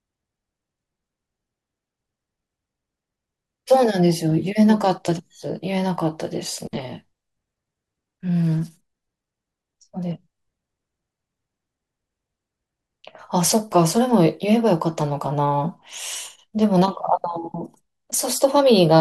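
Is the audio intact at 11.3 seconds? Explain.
Yes, at 11.3 seconds the speech plays through intact, with no dropout, click, glitch or other fault at that moment.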